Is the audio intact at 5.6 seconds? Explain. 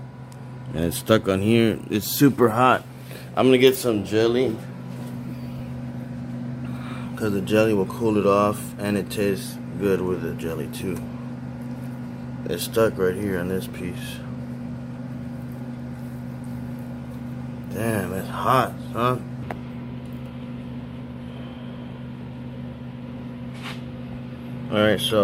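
No. At 5.59 s there are lost LE Audio frames: about 10 ms goes missing, which fits a single LC3 frame. The decoder refills the gap by reusing the previous spectrum with randomized signs, so tonal content briefly becomes a noisy smear. A spectrogram would show a thin vertical smudge where harmonic lines blur, and the waveform would show a brief patch of irregular, noise-like texture.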